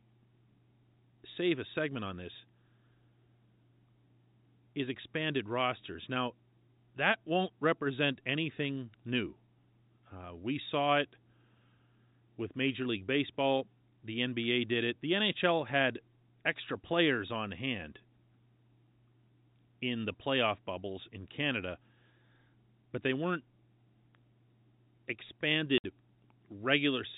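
At 25.78 s, packet loss filled with silence cuts a 60 ms hole in the speech. The gap fits three lost 20 ms packets and has hard edges.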